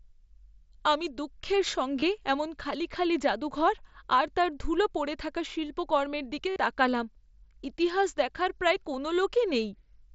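Speech carried over a wideband mSBC headset link has concealed Bluetooth headset packet loss at 2.00–2.02 s and 6.50–6.56 s. The receiver filled 22.5 ms and 60 ms gaps by repeating recent waveform. Both runs give a brief buzzy tone and warble.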